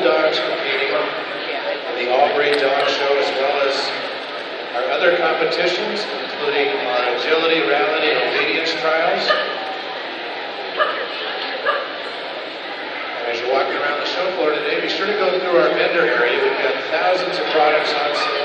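Across the whole of this audio there is a plainly audible watery, swirling quality, with attacks smeared rather than crisp. This is likely MP3 compression, at a level of damage that fits a bitrate around 64 kbps. With too few bits available, the encoder discards weaker frequency components in each short frame, so they switch on and off from frame to frame. That produces the swirl, and the coarse coding in time blurs sharp onsets.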